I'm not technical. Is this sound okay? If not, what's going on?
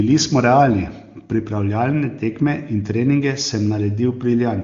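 Yes, this speech sounds fine, with no problems.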